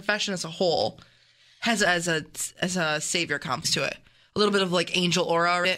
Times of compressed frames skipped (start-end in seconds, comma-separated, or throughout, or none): 3.64, 5.64